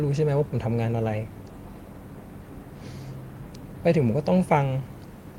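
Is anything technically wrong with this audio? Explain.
No, nothing technical stands out in this speech recording as far as I can hear.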